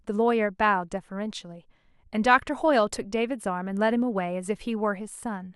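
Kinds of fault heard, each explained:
No faults turn up in this one, just ordinary speech with nothing odd to point at.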